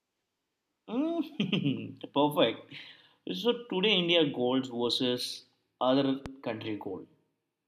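A speech clip with a single loud pop at 6.26 to 6.28 s, just after "gold versus other". It is one sharp transient lasting a couple of hundredths of a second and peaking around 10 dB above the speech. The speech continues underneath it without interruption. The likely cause is an electrical pulse entering the signal chain, such as a switch, plug contact, static discharge or driver glitch. The downstream circuitry then shaped that pulse into an audible pop.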